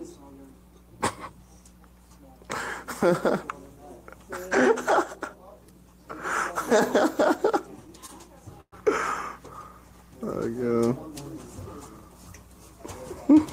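At 8.06 to 8.11 s there's a short stall from a late packet: the receiver stretched the last sound for about 26 ms until data arrived, so it drags briefly with nothing lost. Then at 8.61 to 8.74 s a call audio freeze holds the sound for 115 ms, fading into roughly 70 ms of silence before resuming, likely packets held up in transit.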